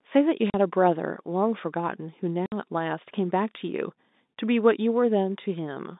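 At 0.5 s and again at 2.46 s, packet loss filled with silence: the receiver got nothing and played silence instead, cutting 40 ms, then 60 ms, out of the narrowband telephone speech. Both fit whole 20 ms packets, and each hole starts and stops with hard edges.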